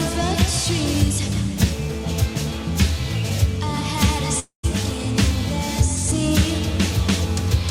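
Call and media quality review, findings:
Long network dropout, music, 4.39 to 4.66 s. Final sound smeared into a fading buzz for about 240 ms, then roughly 120 ms of silence; about 240 ms of music missing on return. Likely cause: packet loss concealment on the receiving end stretching the last audio. Unlike a short glitch or click, the gap is audible and the music resumes later, not where it stopped.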